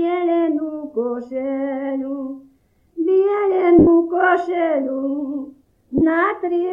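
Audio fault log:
3.79–3.87 s and 5.98–6.01 s: lost LE Audio frames. The sound breaks into a brief noisy smear instead of continuing cleanly. The first gap lasts 80 ms, which fits eight 10 ms frames, and the second lasts 30 ms, which fits three. The LC3 decoder conceals each gap by repeating the last good spectrum with randomised signs, so tonal content loses its phase coherence and turns to noise. Over the longer gap, the concealment fades toward silence after its first few frames.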